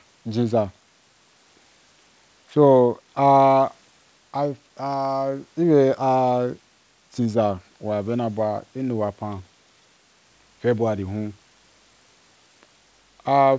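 No technical faults can be heard in the speech, which is band-limited to nothing above 8 kHz, as expected from the call's microphone processing and a wideband codec such as G.722 at 64 kbps.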